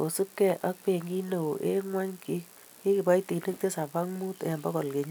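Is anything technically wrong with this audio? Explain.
Yes. Sharp single clicks occur at 0.50, 1.53 and 4.52 s, likely dropped samples: a fraction of a millisecond goes missing, so the waveform jumps abruptly.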